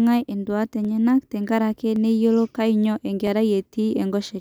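Dropped samples at 0.85 s, 1.96 s (just before "neyiolo kanyio") and 3.27 s (just after "neyiolo kanyio") break this speech clip with three single sharp clicks, likely from a tiny slice of the stream, well under a millisecond, going missing so the waveform jumps abruptly forward.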